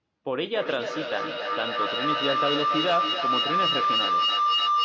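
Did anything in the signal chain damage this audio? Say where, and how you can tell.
Yes. From 0.54 s to the end of the speech there is feedback howl, an acoustic loop in the call path where a nearby device's loudspeaker is picked up again by the microphone. Each pass returns louder, so the repeats grow and narrow to a tone around 1 kHz that pulses roughly every third of a second and peaks at about 3 dB above the speech. On a spectrogram, a bright horizontal band near 1 kHz thickens in beats while the waveform envelope swells, all under the call's 8 kHz ceiling.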